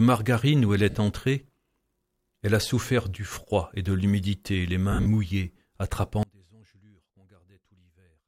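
Lost LE Audio frames occur first at 0.90 to 0.95 s, a 50 ms gap that fits five 10 ms LC3 frames going missing over the Bluetooth LE Audio link. The decoder fills the hole by replaying the last good spectrum with random signs, so tonal content blurs into a brief noisy smear. They return at 4.92 to 5.06 s, where 110 ms of audio is lost in scattered runs across 140 ms, the longest around 50 ms. This gives a stuttering, hissy patch rather than one clean concealment.

A sudden gain jump at 3.18 to 3.32 s drops the level by about 4 dB in a single step, with sound and background noise falling together and no smooth ramp between them. This is likely a digital gain setting or bit shift applied instantly instead of being faded in.

An audio dropout to a faint residue begins at 6.23 s and lasts to the end of the clip. The sound cuts off abruptly, not as a fade or natural pause, and what remains is a faint trace of it about 30 dB below its normal level. 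The likely cause is that the wanted signal was lost while the path after the break stayed live, letting only a weak leak through.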